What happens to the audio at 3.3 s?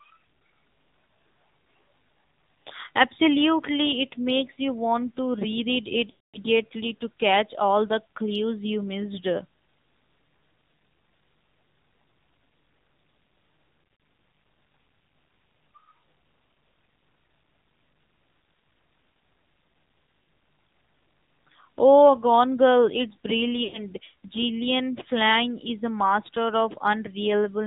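At 3.3 s the speech sounds muffled, buzzy and synthetic. The cause is the AMR narrowband mobile codec, present throughout, cutting everything above 4 kHz at a bitrate that fits about 7.4 kbps.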